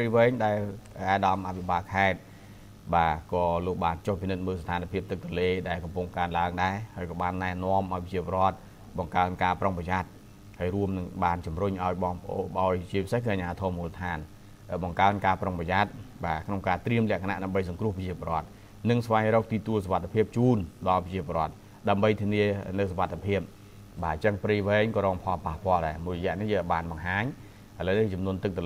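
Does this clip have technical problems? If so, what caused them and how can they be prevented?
No, no technical faults are audible anywhere in this clip, so there is nothing to trace or prevent.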